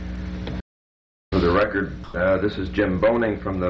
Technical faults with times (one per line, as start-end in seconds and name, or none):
0.61-1.32 audio dropout to silence
2.04-2.14 sound dropped by the voice detector